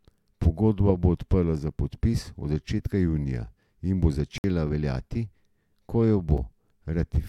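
A short hole follows "začetka junija in bo" from 4.38 to 4.44 s, and a lone tick after "ko jo" at 6.38 s. Both are blocks of digital silence, where the sound dropped abruptly to silence, 60 ms and under 5 ms long.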